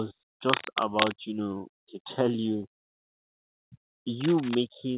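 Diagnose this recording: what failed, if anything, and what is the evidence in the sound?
Two stretches of dense, ragged scratching sit over the speech, from 0.48 to 1.15 s, ending just before "you know to tell", and again from 4.20 to 4.55 s. The first is about as loud as the speech itself and the second a little quieter, roughly 5 dB down. That uneven crackle is likely cable scratch noise in the analogue wiring: a worn lead, plug or pot being moved, with its contact resistance jumping around and spraying noise into the signal.

Right after "you know to tell", from 2.46 to 3.50 s, the speech drags and hiccups, with around nine small stalls where the last bit of sound is held over. The longest is about 100 ms, and together they come to roughly a quarter of a second, so about 25% of the stretch is filled-in sound. Nothing actually goes missing, so this is repeated stalls (stutter) at the network and jitter buffer stage. 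Packets kept arriving late, the buffer kept running dry, and the receiver padded each gap until it could carry on. The narrow call-path band, with nothing above 4 kHz, is just the G.711 codec and isn't part of this.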